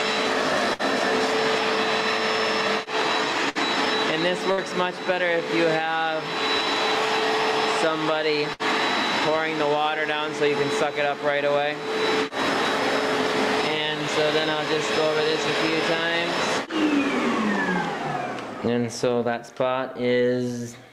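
At 0.73 to 0.82 s, 3.49 to 3.58 s, 4.52 to 4.60 s and 8.53 to 8.62 s, a burst of packet loss interrupts the audio. Each time, about 60 ms of data never arrived in time, and the receiver bridged the gap by extending the preceding sound while fading it out. This is heard as a short buzz or hiss that decays. The audio then resumes with roughly 60 ms of material skipped.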